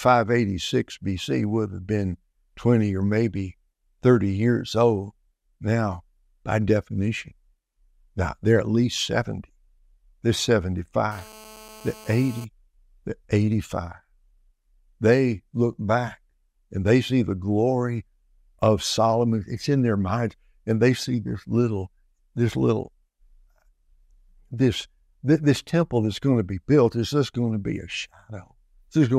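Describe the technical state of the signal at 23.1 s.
At 23.1 s the speech signal is intact, with no audible technical fault at that moment.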